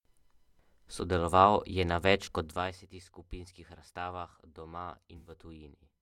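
AAC frame loss with concealment hits at 2.24–2.28 s and again at 5.17–5.32 s; the decoder patches the gaps from the previous spectrum, leaving a brief smeared, phasey blur, the second one longer.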